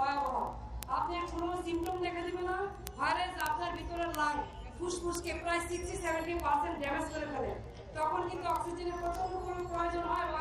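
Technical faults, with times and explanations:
0.12 to 10.40 s: word clock ticks. A steady train of sharp ticks recurs roughly every 30 ms, hundreds in all. The receiving device runs on its own clock, around 700 parts per million off the sender's. At each slip it misreads samples and drops or repeats one.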